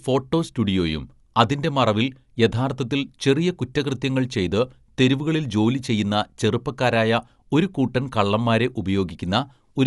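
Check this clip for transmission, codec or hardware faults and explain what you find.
One codec fault runs through the whole clip: Dolby Digital compression, likely at a bitrate near 64 kbps. Nothing sounds above 11.4 kHz, so the speech is dull. Bit-starved frequency lines are refilled with dither noise, giving a rough flutter around tones rather than the watery swirl typical of MP3.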